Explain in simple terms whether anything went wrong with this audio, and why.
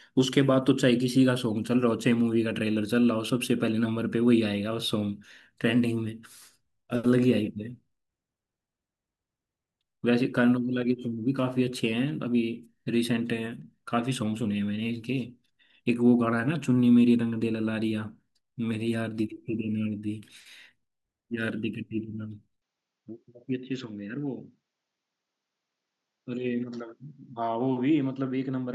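Input switched to a poorer device, at 22.62 s: the voice abruptly turns duller and a little quieter until the end, with a faint new background noise and no gap. Likely the recording jumped to a lesser microphone that captures nothing above 7.6 kHz.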